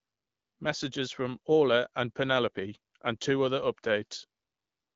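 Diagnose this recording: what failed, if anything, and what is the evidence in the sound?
Nothing in this recording has failed: the speech sits on an AMR wideband (HD Voice) link that sounds like it's running at 12.65 kbit/s, where the codec leaves only a light mark, and no stage along the chain shows any trouble.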